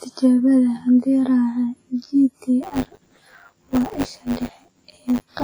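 From the start the speech sounds hollow and phasey, with a thin colour that never changes. This is channel delay (comb filtering): one channel arrives roughly 10 ms behind the other, and when the two are summed to mono, whatever they share cancels at a fixed series of evenly spaced frequencies. The first notch sits somewhere around 40 Hz, and the rest repeat up the spectrum, carving regular gaps that leave the sound scooped out.

Throughout the clip there is also a washy, ringing quality. A grainy hiss swells and fades with each utterance, and transients smear over tens of milliseconds. The damage is heavy. This is likely WMA compression at a low bitrate, which would fit roughly 24 kbps. Long transform blocks spread quantisation noise around each sound, and weak spectral lines are dropped to zero, leaving a hollowed, metallic residue.

At 2.62 s a robotic buzz at 100 Hz appears on top of the speech and continues to the end, rattling only while there is signal. 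This is buffer tearing. The writing program and the playback hardware have drifted so that they cross inside every period, which points to a buffer about 10 ms long. Roughly a tenth of each buffer holds stale audio from about 20 ms earlier, spliced in with hard edges on both sides. Those joins repeat 100 times a second and produce the buzz.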